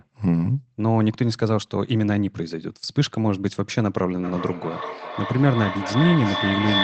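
From about 4.23 s to the end there's feedback echo between two devices: two devices in the same room are on the call, and one plays out what the other's mic sent, so that mic hears it again. Neither echo canceller touches sound from the other device. You get repeats roughly every 0.4 seconds, each thinner and more ringing, and at their loudest they reach about 2 dB below the speech, so they stack up rather than fade.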